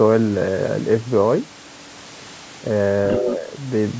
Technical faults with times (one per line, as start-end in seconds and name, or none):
3.11-3.36 other side's voice leaking through
3.19-3.48 speech suppressed in double talk